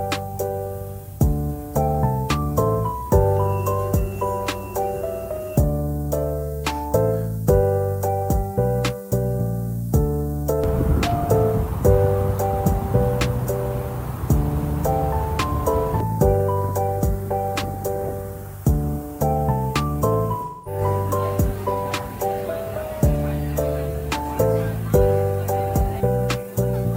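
From the start, the whole clip has low bit depth with noise shaping. The sound is held at a coarse resolution, which fits an 8-bit signal. Each sample is rounded to few levels. The rounding error is fed back and pushed upward in frequency. The result is a steady, thin hiss. It climbs sharply toward the top of the band. It sits only around 20 dB below the sound.

At 20.45 s comes an AAC frame loss with concealment, lasting until 20.81 s. About 213 ms of audio is lost, which fits roughly five lost frames. The decoder had no data for that stretch. It rebuilt the sound from the last good spectrum. The patch sounds smeared and noisy, with a hollow, phasey colour. Then the real signal returns.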